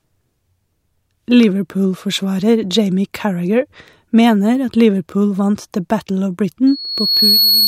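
At 6.67 s a loudspeaker feedback squeal begins and runs until the clip ends at 7.68 s. The microphone is picking up the speaker it feeds, and at about 4.4 kHz the loop gain has crossed unity, so that one frequency keeps reinforcing itself. It swells over well under a second and settles a few decibels above the speech. A steady interference whine would sit at a constant level from its onset, but this tone grows out of the loop on its own.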